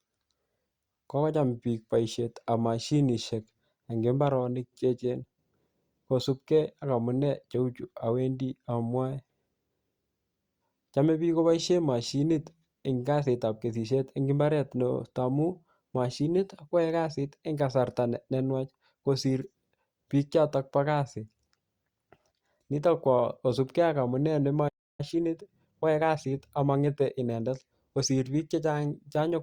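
A playback stall at 24.68 s cuts the speech off mid-flow, leaving about 0.31 s of silence until 25.01 s. The player likely ran out of buffered data or had its output thread blocked, and the speech then resumes.

Time-compressed catch-up follows from 25.01 to 28.01 s. To clear the backlog the stall built up, the player trims small slices and cross-fades the joins, so the speech runs about 1.1 times faster at unchanged pitch.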